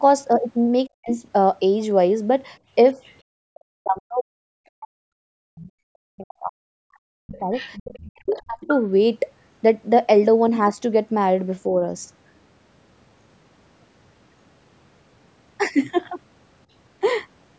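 The speech drops almost to nothing from 0.86 to 1.1 s, dips slightly at 2.93 s, and fades out deeply, by about 40 dB, from 3.46 to 7.51 s. This is speech suppressed in double talk, likely because the echo canceller ducked the talker along with the echo.

A faint second voice, about 35 dB down, surfaces from 3.06 to 3.15 s. It returns more clearly, about 20 dB down, from 7.33 to 8.02 s. This is the other side's voice leaking through, likely residual loudspeaker echo the canceller missed.

Suppression hits again from 8.04 to 8.68 s. Leaked scraps cut into it at 8.3 to 8.39 s, about 25 dB down, and at 8.61 to 8.72 s, only about 10 dB down. Through all of this the call's microphone processing trims the lowest bass, which is normal.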